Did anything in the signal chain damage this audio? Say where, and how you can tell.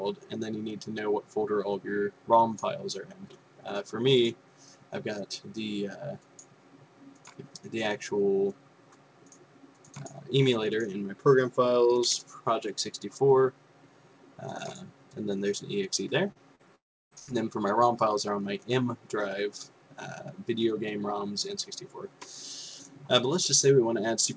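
Yes, at the network stage. Brief smears at 16.32–16.38 s and 16.55–16.62 s are short concealed packet loss. About 40 ms went missing each time, and the receiver extended the preceding sound to cover it.

From 16.75 to 17.14 s the preceding sound is continued and fades, and then comes roughly a third of a second of silence. This is likely a long network dropout, with the concealment giving up before audio resumed.

At 17.19–17.30 s the preceding sound, continued and fading, replaces about 80 ms of sound. This burst of packet loss came from packets that were lost or arrived too late to play.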